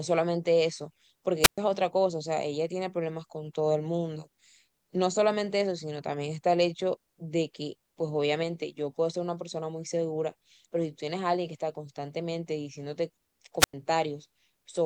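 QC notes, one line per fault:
1.42–1.58 s and 13.59–13.74 s, wireless microphone squelch dropout: the radio link fades, there's a quick rise of hiss, then the receiver's squelch mutes the feed, leaving holes of near silence of about 117 ms and 96 ms before the speech comes back.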